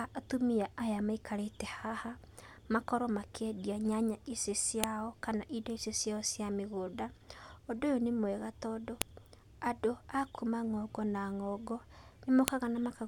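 File header played as audio clicks through this speech clip at 4.84 s (between "makorwo makĩendia nyanya icio" and "kana indo icio ciao"), 9.02 s (after "ũyũ nĩ mwega tondũ") and 12.48 s. Joined pieces kept their header bytes, which play as sharp snaps.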